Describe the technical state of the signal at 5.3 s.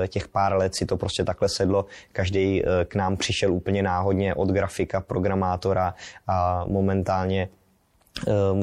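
At 5.3 s the speech carries MP3 compression artefacts, present throughout the clip and plainly audible: weak frequency components flicker between frames, giving a watery, swirly sound with chirpy sibilants. This likely comes from encoding at a low rate around 64 kbps. A simple low-pass filter would dull the top without any of that shimmer.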